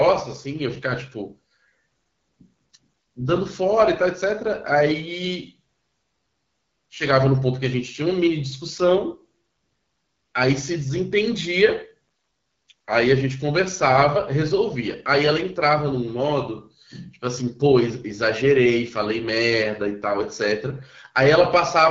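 From start to finish the speech runs through the AMR wideband (HD Voice) codec, and the damage is plainly audible. Only the band up to 6.4 kHz is actually modelled from pulses driving a vocal tract filter, with 6.4 to 7 kHz filled by shaped noise. At a rate this starved there isn't enough detail to rebuild the excitation cleanly, so the voice comes out rough and raspy, which fits the 8.85 kbit/s mode.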